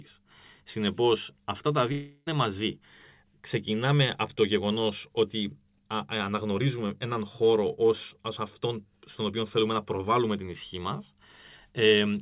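At 1.92 s the speech breaks off and a fading buzz takes its place. It lasts until about 2.28 s, roughly a third of a second. This is likely a long network dropout. Packets stopped arriving, so the receiver stretched the last sound it had to cover the hole. The fill never drops to full silence. When the speech returns, the missing part is simply gone. Throughout, nothing sounds above 4 kHz, which fits narrowband telephone coding.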